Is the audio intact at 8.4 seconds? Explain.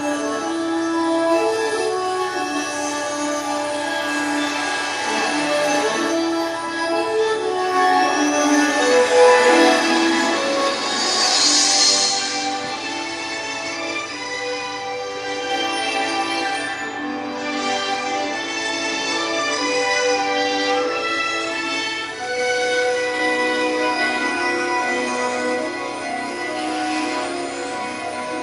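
Yes, the audio is intact at 8.4 seconds, with no dropout, click, distortion or other fault at that point.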